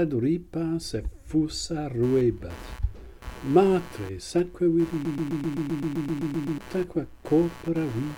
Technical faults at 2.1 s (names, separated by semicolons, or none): computer activity noise